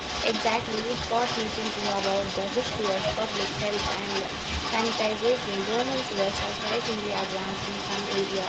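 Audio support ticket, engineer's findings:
Echo leak, 0.00–8.48 s: speech repeated 326 ms late, about 5 dB quieter than the original. Likely a speakerphone echo canceller leaving residual mic pickup in the return path.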